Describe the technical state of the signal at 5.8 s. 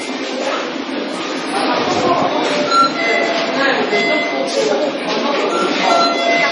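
At 5.8 s the sound is watery and swirly, with nothing above 10.5 kHz, as it is throughout. The cause is likely heavy MP3 compression, consistent with a bitrate around 32 kbps: short of bits, the encoder cuts the treble and switches weak frequency lines on and off between frames.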